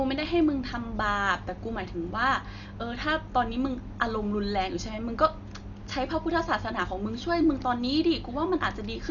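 Throughout the speech, heavy coding damage leaves the sound dull, with nothing above 6.9 kHz and rough, fluttering noise around tones. This is likely Dolby Digital compression at a bitrate near 48 kbps. On a spectrogram, its dither-filled lines appear as speckled harmonics under a hard ceiling.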